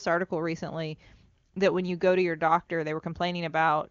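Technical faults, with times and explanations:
The speech comes through the AMR wideband (HD Voice) codec with content reaching up to about 7.2 kHz and little or no audible coding damage, which fits the codec running at or near its highest rate.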